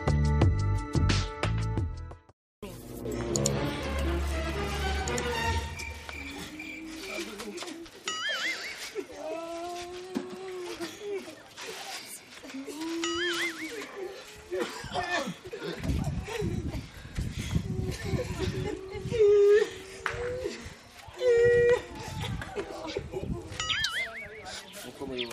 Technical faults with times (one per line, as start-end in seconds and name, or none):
none